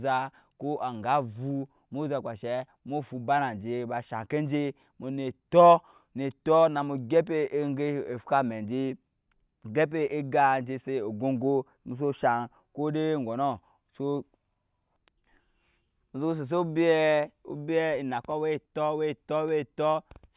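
Nothing in this speech recording stood out as a technical fault on listening.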